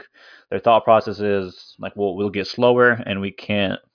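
Nothing stood out on listening to this speech recording.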